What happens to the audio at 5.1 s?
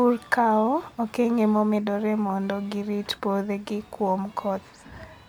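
Nothing goes wrong at 5.1 s; the speech there plays through intact, with no dropout, click or distortion.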